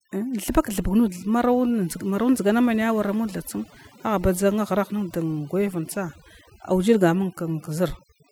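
Overdone noise removal runs through the whole of this roughly 8-second speech clip. A noise reduction stage set too aggressively is pushing individual frequency bands down or cutting them out entirely whenever their level sits close to its idea of the background noise. The background drops and breaks up into twinkling, chirpy specks, and the softer parts of the speech get swallowed along with the noise.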